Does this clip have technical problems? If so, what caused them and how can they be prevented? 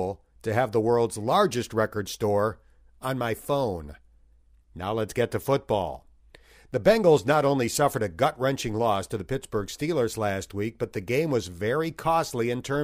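No, this clip has no technical problems, so there is nothing here to prevent.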